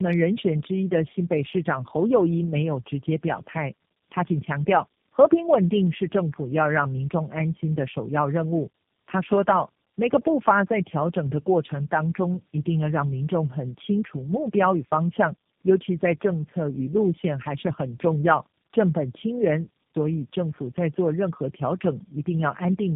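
Tandem speech coding affects the whole of this speech clip. The voice is rough, muffled and warbly, and nothing is left above 3.7 kHz. That degradation fits a call decoded and re-encoded at each network border, passing through something like AMR-NB at two rates and ending in G.729A, with G.711 links between them. Each codec stage compresses audio that the previous stage has already damaged, so the losses stack up and the result is harsher than any single codec would produce.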